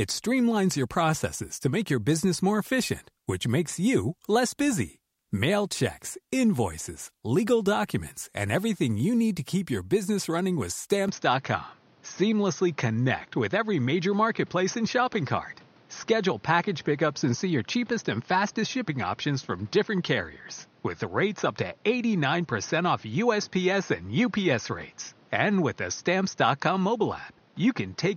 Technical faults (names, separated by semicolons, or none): input switched to a poorer device